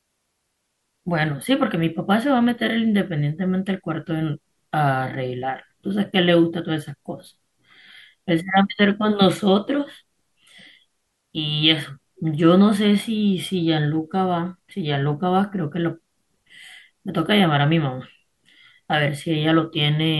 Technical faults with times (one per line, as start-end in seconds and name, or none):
none